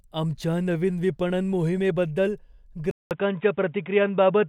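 At 2.91 s there is a 0.2 s gap, then the speech returns dull, with nothing above 3.8 kHz, until the end. The likely cause is an input switched to a poorer device.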